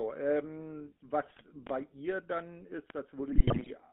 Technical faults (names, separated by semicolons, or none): GSM full-rate codec; GSM bit errors; loud pop